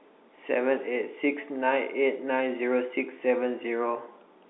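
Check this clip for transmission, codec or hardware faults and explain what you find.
The speech comes through as ordinary narrowband telephone audio, with the G.711 telephone coding doing its normal job: the band runs from about 250 Hz up to roughly 3.7 kHz, nothing is heard above about 3.8 kHz, and the only trace of the coding is the faint background texture that follows the signal level.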